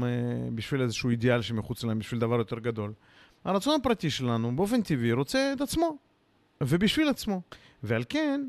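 Nothing stood out on listening to this speech recording.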